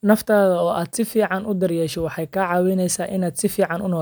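No faults to report: nothing in the recording stands out as a technical problem at any point.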